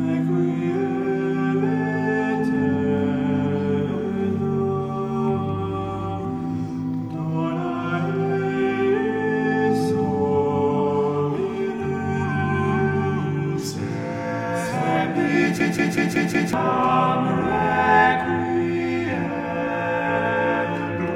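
At 15.6 s the audio freezes into a system hang loop until 16.53 s. A 186 ms slice repeats exactly five times at about 5.4 Hz, a machine-gun stutter rather than a buzz. That length fits an 8192-sample ring buffer cycling while the system stalled, and roughly a second of real audio is lost.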